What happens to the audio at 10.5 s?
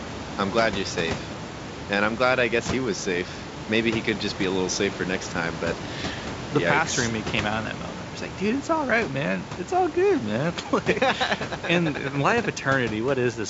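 Nothing goes wrong at 10.5 s; the speech carries on intact through that moment, with only the steady room noise well beneath it and the wideband telephone coding's upper limit near 7.7 kHz.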